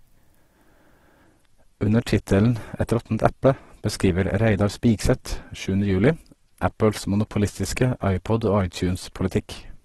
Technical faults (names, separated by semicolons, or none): adaptive stream at a lower bitrate